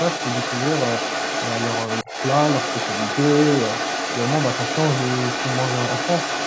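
From 0.0 s to the end, a second voice runs underneath at a level only slightly below the main speech, likely the other side's voice leaking through past an incomplete echo canceller. Between 2.03 and 2.11 s the main speech briefly drops deeply, likely speech suppressed in double talk as the canceller attenuated both talkers together.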